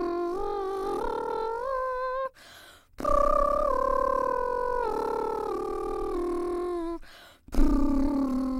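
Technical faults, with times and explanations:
Nothing stood out on listening to this music.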